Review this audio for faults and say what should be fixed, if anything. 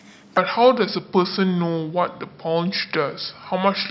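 A wrong sample rate sets in at 0.37 s and lasts to the end: the samples are played at a slower clock than the one they were captured at, with no resampling in between, which fits 22 kHz audio being read out at 16 kHz. Because rate and pitch are tied together, the speech runs at 0.726 times its proper speed and drops by about 5.5 semitones, so it sounds low, heavy and dragged out. Preventing it means checking the stream's stated rate at every handoff and resampling whenever the output rate differs from the source.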